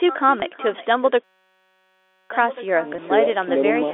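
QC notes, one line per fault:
throughout: echo with no canceller. Every phrase is trailed by a quieter, thinner copy roughly 400 ms later, about 16 dB down. The far end's loudspeaker feeds its microphone with nothing cancelling it. Unlike room reverb, this is a distinct delayed repeat, not a smooth decay.
0.40 s and 2.96 s: packet loss with pitch repetition. Two brief gaps of about 20 ms each, which fits one lost packet apiece, are bridged by repeating the last pitch period. Each sounds like a momentary held, buzzy note rather than a dropout to silence or a click.
1.24 to 2.30 s: system hang loop. A 5.33 ms fragment, which fits a 256-sample buffer, repeats exactly about 199 times, giving a steady buzz at 188 Hz. The machine stalled while the hardware kept cycling one buffer. Unlike concealment, it never fades and lasts over a second.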